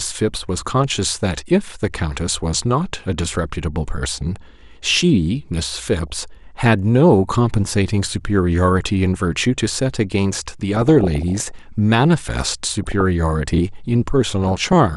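MP2 compression runs through the whole speech clip. The sound is dull and carries a gurgling, granular edge. This is likely from MPEG Layer II coding at a low rate, around 80 kbps, where upper sub-bands drop out and the remaining ones are coarsely quantised.

DAB burbling hits at 6.01 to 6.19 s, 10.75 to 11.51 s, 12.69 to 13.01 s and 14.42 to 14.73 s. Bit errors of under a percent slip past error correction, corrupting samples so that short blips of noise appear in single sub-bands, and corrupting scale factors so that individual sub-bands jump in level. The result is a watery, burbling disturbance, longest around 11 s.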